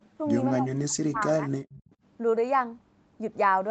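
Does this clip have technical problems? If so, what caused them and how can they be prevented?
Yes. From 0.0 to 0.18 s the background is gated by the echo canceller. While the far-end loudspeaker was active, the canceller pulled the microphone down by up to about 16 dB, so the room tone dips for roughly a fifth of a second and then recovers. Only the background falls away here, with no talker being cut, which separates it from double-talk suppression. Tuning the suppressor to attenuate more gently during far-end activity prevents this.

Between 0.57 and 1.48 s the speech is suppressed in double talk. The talker's level collapses by something like 40 dB in stretches, for about a second in all. The likely cause is both sides speaking at once: the canceller could not tell the near-end voice from the loudspeaker echo and treated both as echo. It is the foreground voice that breaks up, not just the room sound. 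A canceller with better double-talk detection, or a headset, prevents it.

From 1.7 to 1.9 s there is an echo leak. A faint repeat of the voice arrives 266 ms after the original, some 25 dB below the speech. This is likely the far side's loudspeaker sound slipping past its echo canceller and being sent back. The fixed quarter-second lag and the separate copy distinguish it from room reverberation, which would smear continuously. Headphones on the far end, or lower speaker volume, prevent it.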